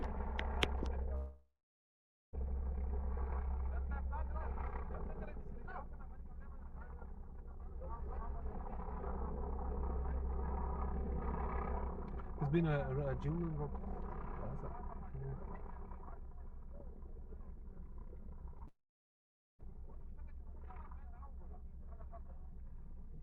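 From 1.15 to 2.35 s the sound smears into a fading continuation, then about 0.88 s of near silence, likely a long network dropout. A spectrogram shows stretched energy decaying into a blank band. A short concealed packet loss at 18.59 to 18.62 s leaves a brief wobble, visible as a small smeared patch. At 18.68 to 19.70 s likely a second long network dropout fades into about 0.84 s of flat waveform, with the missing audio never returning.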